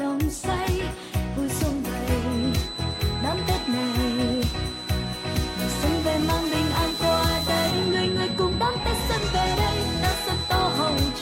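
From 2.24 s to the end, a feedback whistle sits behind the sound: a thin, steady tone at 4 kHz, roughly 10 dB below the main signal, swelling and fading slowly in level. It is likely a loudspeaker-to-microphone loop held just short of instability, so the tone persists without growing. Unlike a runaway howl, it never builds into a howl, and unlike mains hum, it is a single high pitch rather than a low buzz.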